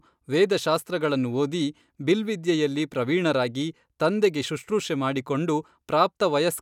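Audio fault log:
No faults found in this speech.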